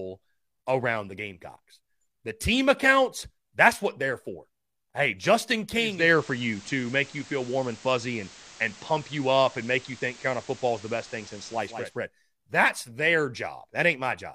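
At 5.72 s the receiver lost its digital stream and blended across to the station's FM analogue broadcast over about half a second, returning to digital at 12.03 s. This is digital radio blending to analogue. While on FM, a steady hiss sits roughly 20 dB beneath the speech. The level also shifts by about 2 dB at each blend.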